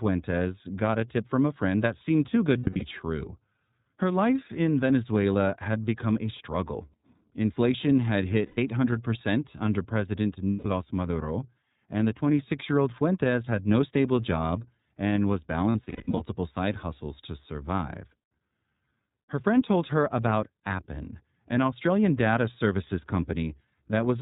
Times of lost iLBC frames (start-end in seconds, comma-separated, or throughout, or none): 2.58-2.83, 8.46-8.58, 10.50-10.66, 15.72-16.22